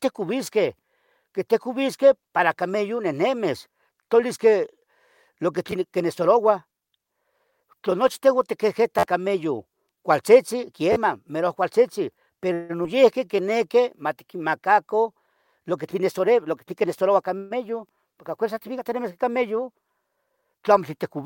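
At 5.71 s, just after "lo que", a repeated buffer plays one short slice of about 11.6 ms twice, which fits a 512-sample buffer. The device ran out of fresh audio and replayed the last block, with roughly 10 ms of sound lost. The same fault returns from 8.99 to 9.03 s, just before "cameyon cualtzetzen", with four extra plays, and from 10.93 to 10.96 s, between "cameyon cualtzetzen" and "merouac cualtzitzin", with three. Each of these is a brief stutter with a hard join at every repeat.

From 12.53 to 12.71 s a call audio freeze stretches the last sound into a fading buzz or hiss for about 159 ms, with no silence. Packets were likely held up in transit, draining the jitter buffer. Playback then resumes where it stopped, so a gap is inserted and no audio is lost.

At 12.83 to 12.86 s, short concealed packet loss drops about 40 ms of audio. The receiver bridges the hole with about 11 ms of synthesized continuation and blends back in, heard as a quick smear.

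From 13.25 to 13.53 s a jitter buffer slow-down repeats single pitch periods to rebuild reserve. It adds about 36 ms, so the audio runs at 89% speed with unchanged pitch and sounds drawn out.

From 15.34 to 17.11 s a jitter buffer speed-up trims short pitch-period segments repeatedly to shed excess delay. It removes about 150 ms in total, and the audio runs at 109% speed with the pitch intact, sounding noticeably hurried.

At 17.38 to 17.53 s a second call audio freeze extends the last sound for about 128 ms as a fading buzz or hiss, again with no silence, before playback picks up where it stopped.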